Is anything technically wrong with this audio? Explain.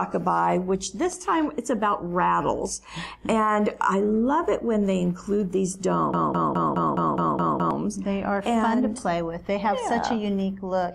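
Yes, there is one fault. From 6.14 to 7.71 s there is a broken-record loop. A 209 ms fragment repeats eight times, back to back. A stalled stream likely resent it. The audio meant for that stretch is lost.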